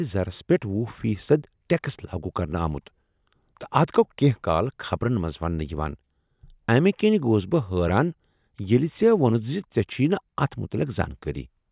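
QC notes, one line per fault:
No technical faults were found anywhere in the recording; the signal stays continuous and intact, with no events needing attention.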